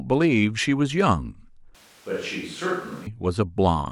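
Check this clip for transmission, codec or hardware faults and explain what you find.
One fault is audible. From 1.75 s to 3.07 s the speech switches to a distant microphone, likely because the close mic's signal dropped out. The voice turns abruptly roomy and hollow, loses bass, falls about 5 dB and carries more room noise, then snaps back.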